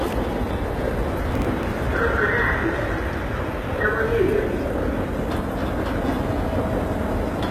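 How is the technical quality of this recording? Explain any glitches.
The recording has two technical problems: a band-replicated, gritty treble across the whole clip, and a short burst of crackle early on.

Throughout, the sound was likely coded with HE-AAC compression at a low bitrate, around 20 kbps. The codec kept the lower spectrum and rebuilt the treble from copied lower bands, so the highs, which stop at 14.8 kHz, sound plainly gritty and metallic.

From 1.31 to 1.72 s there is processor overload crackle. The processor missed its deadlines for several small buffers of roughly 10 ms in a row and replayed stale audio in their place. Those hard-edged repeats run together into a tearing crackle over the sound.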